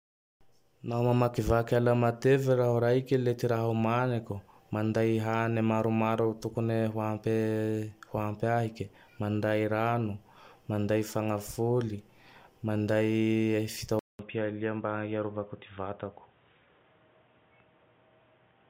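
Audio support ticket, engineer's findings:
Speech goes dull and boxy from 13.99 s to end, after a 200 ms dropout; nothing above 3.8 kHz, level down about 5 dB, new noise floor roughly 40 dB below signal. Input likely switched to a poorer device, its narrower capture band and own gain taking over.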